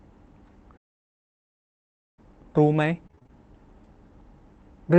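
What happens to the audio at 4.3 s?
Nothing goes wrong at 4.3 s: the speech continues intact through that moment, carried by the call path as it is throughout.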